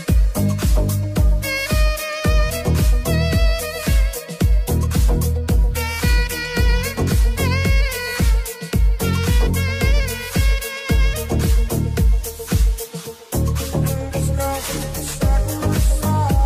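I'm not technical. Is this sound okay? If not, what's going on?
No. Crude rate conversion affects the whole clip. Samples were simply dropped, as in a 48 kHz to 44.1 kHz change, adding a gritty, off-key fizz on loud, bright sounds.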